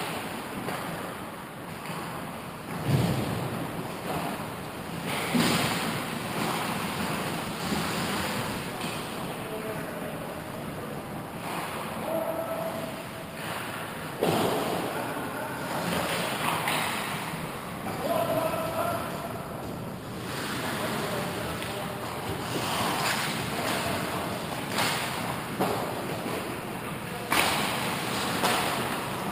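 No technical faults can be heard anywhere in this recording.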